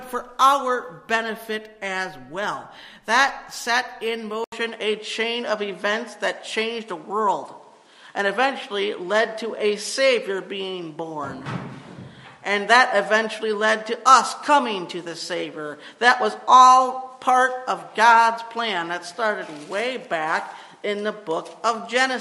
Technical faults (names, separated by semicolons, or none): input switched to a poorer device